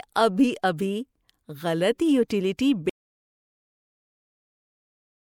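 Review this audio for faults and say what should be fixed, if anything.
Pre-echo at 2.28 s and 2.57 s: a brief hiss of about 19 ms smears in just before each attack because the codec spread block noise ahead of the transient. Unlike a click, it leads the onset rather than sitting on it. Encoding at a higher bitrate or with shorter transform blocks around transients prevents it.

Audio dropout to silence from 2.90 s to the end: the speech cuts off mid-flow and the gap is empty, with no room tone, likely because the input was lost while recording continued. Unlike a quiet passage, nothing at all remains. Checking connections and monitoring input levels while recording prevents it.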